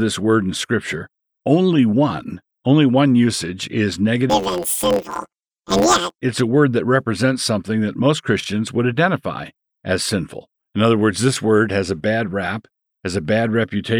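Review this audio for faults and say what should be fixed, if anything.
There's one fault to fix: planar audio read as interleaved, from 4.30 to 6.19 s, between "only one usage is" and "it's a word that". Each block held all its left samples followed by all its right ones, but it got read as alternating pairs. So every block plays twice at double speed. The blocks here are short, about 11.61 ms, which fits a 512-sample block. That's why you hear a robotic buzz at roughly 86 Hz rather than a clear octave jump. To prevent it, check the sample layout flag at every format conversion so planar buffers are never handed to code expecting interleaved data.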